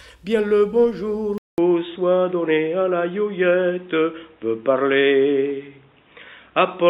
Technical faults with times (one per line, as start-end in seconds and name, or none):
1.38-6.90 input switched to a poorer device